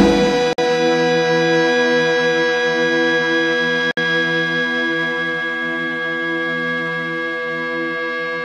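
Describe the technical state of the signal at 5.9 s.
At 5.9 s the signal is intact, with no dropout, distortion, glitch or other technical fault to be heard.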